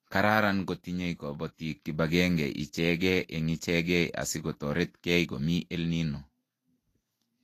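Speech that sounds hissy and grainy from start to finish, with roughened tones, smeared consonant attacks and nothing above 14.2 kHz. This points to Vorbis compression, likely at a low setting around 36 kbps, where coarsely quantised treble turns into noise.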